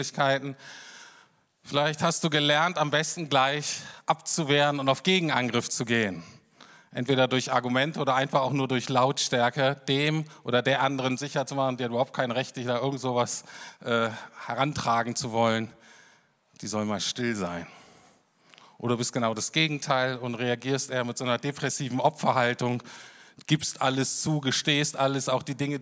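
No technical faults are audible.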